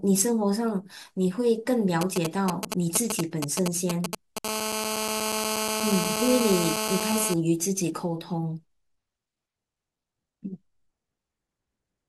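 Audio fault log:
2.01–4.39 s, GSM signalling bursts: a nearby 2G phone sends short clusters of radio bursts, and the audio circuit rectifies them into a galloping dit-dit-dit of brief 217 Hz buzzes, sitting at roughly the same level as the speech.
4.45–7.34 s, GSM phone buzz: the phone now transmits continuously as in a call, pulsing 217 times a second. Rectification turns those pulses into a steady, harsh, harmonic-rich 217 Hz rasp, about 2 dB below the speech and unrelated to it.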